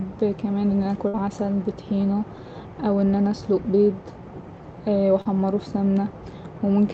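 From 1.07 to 1.15 s, just after "كمان إن أنا", there is a burst of packet loss. Audio arrived too late or not at all. The receiver stretched the last sound for about 60 ms, fading it down. Speech then resumes with roughly 60 ms gone.

At 5.21 to 5.27 s comes a short concealed packet loss. About 40 ms never reached the decoder in time. The receiver patched about 36 ms by extending the preceding sound, then blended back. It sounds like a brief smear in the speech.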